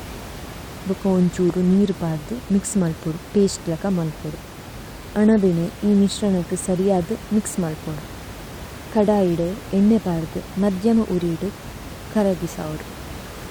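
No faults in the chain; the only thing under the speech is the room's own background noise, about 16 dB down, which belongs to the recording.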